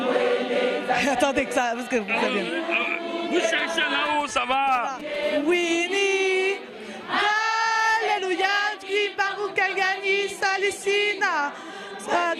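From 3.58 to 5.24 s a galloping dit-dit-dit of short 217 Hz buzzes cuts in, roughly 15 dB below the sound: GSM signalling bursts from a nearby 2G phone, rectified by the audio circuit. From 5.24 to 7.09 s this becomes a steady, raspy, harmonic-rich 217 Hz GSM phone buzz, about 28 dB down, as the phone's pulsed call transmission is demodulated.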